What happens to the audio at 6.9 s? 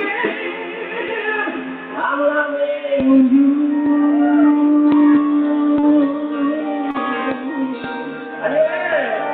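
At 6.91 to 6.97 s there is a short concealed packet loss. About 40 ms of audio never reached the decoder in time, and the receiver covered roughly 33 ms of that gap by extending the preceding sound (pitch-based continuation where it was tonal, shaped noise where it wasn't) before crossfading back into the real signal. It comes through as a brief smear or wobble in the sound, heard through the call codec's band-limited path, which tops out around 12 kHz.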